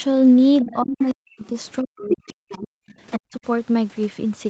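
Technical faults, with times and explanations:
0.61–0.75 s, 1.10–1.14 s and 2.09–3.19 s, other side's voice leaking through: a second voice sits under the speech, about 10 dB down, then barely audible at about 35 dB down, then only about 5 dB below for over a second. This is likely loudspeaker playback reaching the microphone and not fully cancelled.
0.62–2.67 s and 3.18–3.46 s, speech suppressed in double talk: the talker's speech dips sharply, as much as about 40 dB, over roughly a second and a half in the first stretch and a fifth of a second later, coinciding with the leaking voice. The echo canceller likely could not separate the two voices and attenuated both.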